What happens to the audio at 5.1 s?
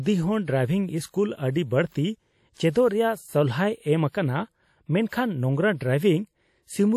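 At 5.09 s a pre-echo appears: a short hiss runs from 5.09 to 5.12 s, about 29 ms, just ahead of a sharp onset in the speech, and the attack itself sounds softened and smeared. The transform block containing that onset had its quantisation noise sized for the loud part, and because that noise is spread across the whole block, it also fills the quiet stretch leading up to the attack.

That moment sits inside damage that runs through the entire clip. The audio has a plainly audible ringing, washy quality, with a hiss that swells and recedes along with the speech, and nothing is present above 18 kHz. This is likely WMA compression at a low bitrate, consistent with about 48 kbps. Long transform blocks smear the coarse quantisation noise over tens of milliseconds, and weak spectral lines are zeroed out.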